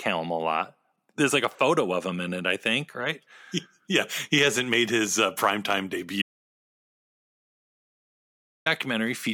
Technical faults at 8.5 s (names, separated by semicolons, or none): audio dropout to silence